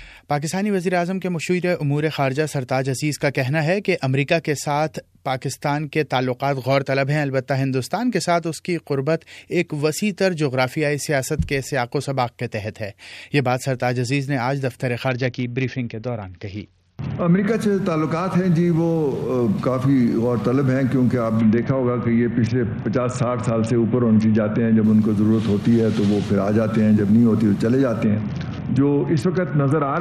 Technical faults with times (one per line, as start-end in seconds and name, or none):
15.08-17.47 Bluetooth SBC bit pool drop
21.41-24.84 Bluetooth SBC bit pool drop
28.04-30.01 Bluetooth SBC bit pool drop